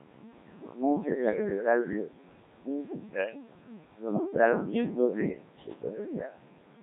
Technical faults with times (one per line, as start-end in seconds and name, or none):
0.00-6.82 Codec 2 vocoder